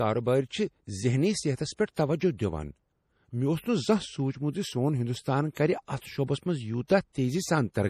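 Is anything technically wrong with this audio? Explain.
Yes. Throughout, the speech sounds watery and swirly, with nothing above 15.1 kHz. This is likely MP3 compression at a low bitrate, around 40 kbps, zeroing weak frequency lines.

Pre-echo occurs at 1.95 to 1.97 s and 5.54 to 5.57 s. Quantisation noise spreads across each block, so about 26 to 27 ms of hiss precedes the attack.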